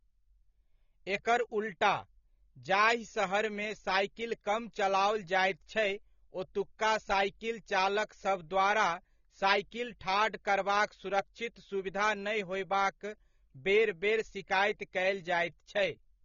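From start to finish, the speech carries plainly audible codec damage, likely from AAC compression. The sound is dull and smeared. Sustained sounds warble, and sibilants turn fizzy. The damage points to AAC-LC at a low bitrate, which fits about 24 kbps. At that rate, the encoder quantises each frame's frequency lines coarsely against a hearing model. It lowers the cut-off, and it either leaves holes in the spectrum or fills bands with substitute noise.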